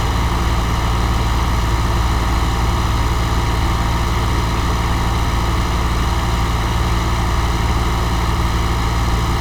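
Nothing stood out on listening to this recording of sounds.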